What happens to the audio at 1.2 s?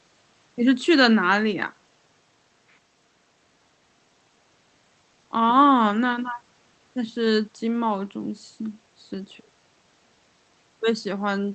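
Nothing goes wrong at 1.2 s: the speech comes through intact, carried by the call path with its ordinary band-limited codec sound.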